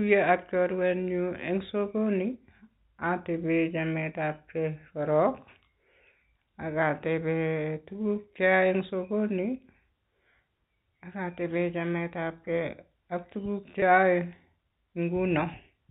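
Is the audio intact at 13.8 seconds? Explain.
No. Right after "tebee chametabge ak tuguuk", packet loss with pitch repetition from 13.80 to 13.82 s bridges a lost 20 ms packet by repeating the last pitch cycle. It sounds like a brief buzzy hold, with identical repeated cycles in the waveform and frozen, flat harmonic stripes on a spectrogram.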